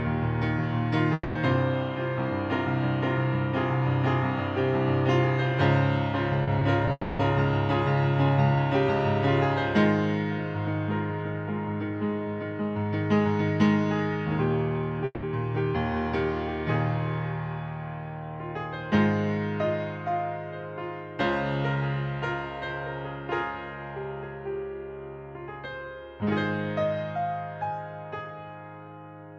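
At 1.13 s the audio breaks off for about 0.24 s. For roughly 220 ms the last sound is stretched into a fading buzz or hiss, followed by about 20 ms of silence before normal audio resumes with that stretch simply gone. This is a long network dropout, most likely a gap in packet arrival where the receiver kept extending what it had until it ran out.

Between 6.43 and 6.89 s there are three instances of short concealed packet loss. The first runs from 6.43 to 6.49 s (40 ms), the second from 6.59 to 6.63 s (20 ms) and the third from 6.85 to 6.89 s (20 ms). In each, a small block of audio missed the decoder, which filled it by extrapolating the preceding signal and then crossfaded back. The result is a brief smear or wobble rather than a hard gap.

Immediately after this cluster, at 6.91 s, a second long network dropout begins and lasts until 7.21 s. About 280 ms of synthesized continuation decays into roughly 30 ms of silence. 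The closeness to the preceding losses fits a burst of network trouble that outlasted what short concealment could cover.

The third long network dropout runs from 15.05 to 15.25 s. About 180 ms of fading fill is followed by about 20 ms of silence, after which the audio returns with the lost portion skipped.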